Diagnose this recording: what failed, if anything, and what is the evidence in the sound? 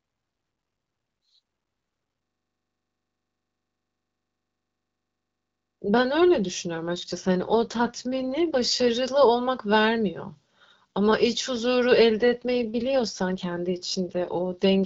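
Network-driven AMR rate drop. From 6.84 to 8.90 s and from 12.18 s to the end, the speech turns rougher and more synthetic with no gap or change in bandwidth, which fits the link forcing AMR-WB down from 12.65 to 8.85 kbit/s to protect against errors.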